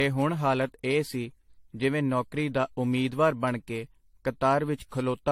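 Repeated lossy coding is the likely cause here: the speech appears to have passed through an AAC-LC encoder around five times, each pass re-quantising on a shifted frame grid so errors stack up. That generation loss runs through the whole clip, giving a swirly, hollow, smeared quality beyond what a single encode at a rate that points to 64 kbit/s would leave. Consonant attacks blur, and nothing remains above 16.6 kHz.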